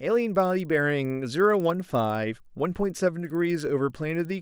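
With the resampler restarted on every block, each 50 ms block was converted alone, leaving an error at every edge: a 20 Hz ticking under the speech throughout.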